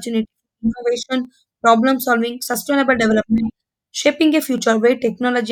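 A few samples at a time are likely being lost from the stream, well under a millisecond at each gap, so this speech clip has four dropped-samples faults. At 1.25, 2.54, 3.38 and 4.58 s the waveform jumps straight from one value to a later one. Each gap is far too brief to remove any audible sound, but the step in the waveform is heard as a single sharp click and would show as a thin vertical line across the spectrum.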